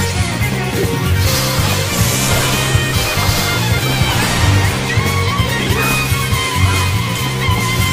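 No fault can be heard anywhere in the clip.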